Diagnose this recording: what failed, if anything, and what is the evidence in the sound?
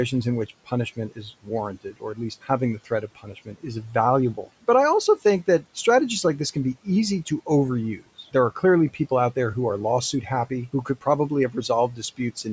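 Call processing: the noise suppressor mistook parts of the speech for noise, pulling them down about 17 dB at 0.49–1.49, 1.84–2.5 and 2.85–3.95 s, and about 16 dB after "out there who are" from 10.12 s.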